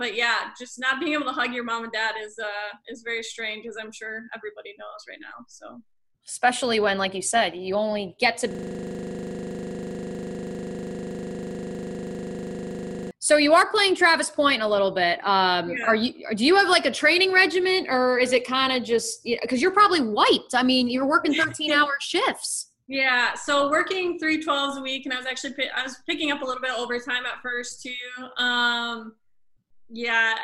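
At 8.51 s the playback system stops supplying new audio, as if the computer or its driver has frozen, while the sound hardware keeps replaying the last block in its ring buffer. This system hang loop lasts until 13.11 s. A 40 ms slice repeats exactly, over a hundred times, so the sound turns into a rigid, mechanical buzz at a 25 Hz loop rate, closer to a rapid stutter than a tone, before normal audio returns.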